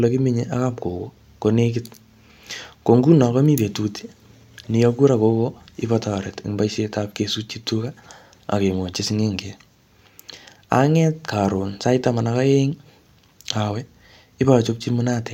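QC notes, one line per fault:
No technical faults are audible in the signal at any point in the speech clip.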